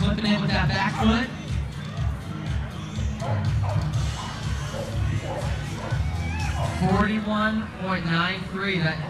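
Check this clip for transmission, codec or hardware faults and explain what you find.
No audible fault from transmission, encoding or playback hardware turns up anywhere in the signal.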